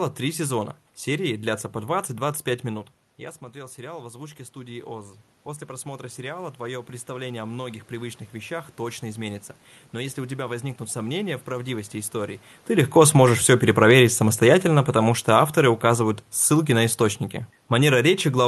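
At about 2.5 s the talker moves back from the microphone, and the level drops by about 15 dB. From 2.68 s to 10.87 s this produces automatic gain rising: the gain control reads the quieter input as too low and slowly adds about 11 dB. Voice and room noise swell up together over those eight seconds, leaving the speech still a few decibels below where it started and the background noticeably raised.

Around 12.5 s the talker comes back toward the microphone. The gain that had been pushed up now meets a louder input, so from 12.7 s to the end, at about 18 s, there is automatic gain falling. The sound jumps forward loud and possibly squashed, then the control steadily pulls its gain back down. Speech and room noise sink together, with the audio still band-limited to about 12 kHz through the call codec.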